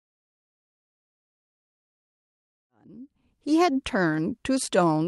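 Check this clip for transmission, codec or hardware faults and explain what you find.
No faults turn up in the speech: the audio carries the ordinary character of an Opus call path, with its top end stopping at about 12 kHz, and the level rises in a smooth, deliberate fade-in from roughly 2.5 s to 3.78 s with no click or hard edge.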